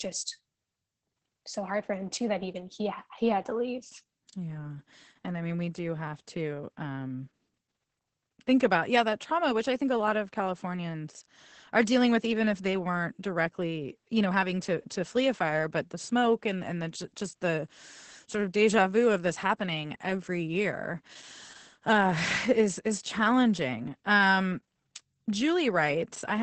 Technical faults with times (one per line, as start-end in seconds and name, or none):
0.00-26.42 Opus voice compression